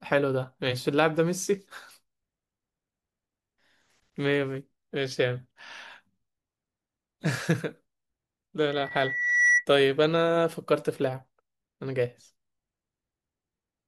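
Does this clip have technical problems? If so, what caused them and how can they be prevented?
Yes. A loudspeaker feedback squeal runs from 8.70 to 9.66 s. One 1.9 kHz tone swells until it rises above the speech. The microphone hears its own loudspeaker, and the loop gain at that frequency exceeds one. Lowering speaker gain or moving the microphone away prevents it.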